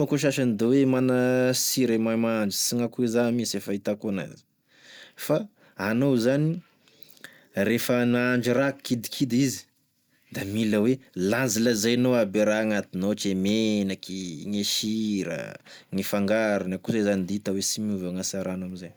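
No technical faults are audible.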